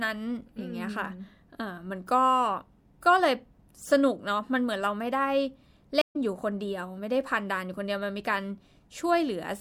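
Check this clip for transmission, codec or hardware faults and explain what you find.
One fault, a stream reconnect. At 6.01 s the speech drops into about 132 ms of silence and comes back at 6.16 s roughly a tenth of a second further on, skipping material. The connection broke, and the player reconnected and restarted its decoder mid-stream at a later point.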